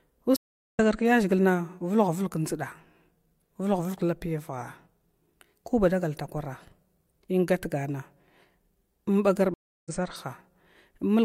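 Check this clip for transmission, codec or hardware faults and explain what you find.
Two stream reconnects break this speech. At 0.36–0.80 s and 9.54–9.91 s the connection dropped and the player restarted its decoder mid-stream, so the speech cuts to silence for about 0.39 s, then 0.32 s, and resumes further on, skipping roughly 0.2 s and 0.15 s.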